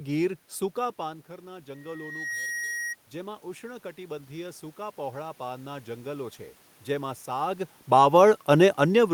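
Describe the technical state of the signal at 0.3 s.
At 0.3 s the signal is intact, with no technical fault, and only the room's own background noise sitting under the speech.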